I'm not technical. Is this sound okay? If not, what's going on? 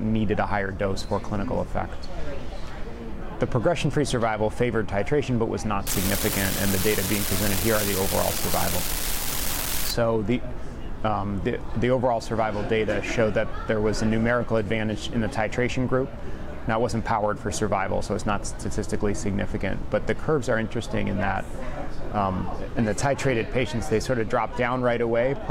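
No. From 5.87 to 9.91 seconds there's an unreliable data bit: one wire carrying the digital audio flips randomly, adding a constant crackly fizz, even in quiet moments.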